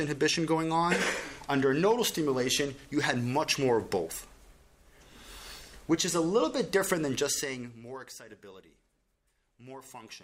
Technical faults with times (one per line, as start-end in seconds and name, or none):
none